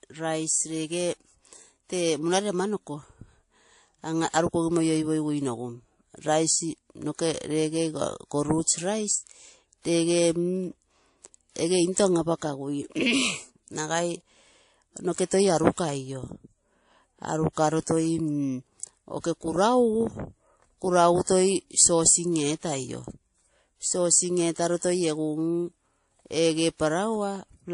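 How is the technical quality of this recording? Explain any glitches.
The quality's fair but clearly second-hand. There's one problem, and it runs the whole way through: it sounds like transcoding between lossy codecs. Nothing reaches above about 10.6 kHz, so the top end feels shut off, and the speech carries two layers of smearing at once. The coarse swirly texture points to an early low-rate MP3 pass, around 40 kbit/s, and the later WMA encode at roughly 64 kbit/s likely spent its bits re-coding that damage while stacking its own artefacts on top.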